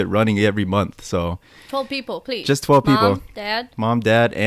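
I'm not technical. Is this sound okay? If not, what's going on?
Yes, this one sounds fine, with nothing wrong that you'd notice while listening.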